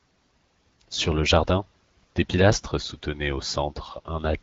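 No faults to report on this speech clip; the AMR wideband (HD Voice) codec path is working normally, band-limited to about 7 kHz as that codec is designed to be.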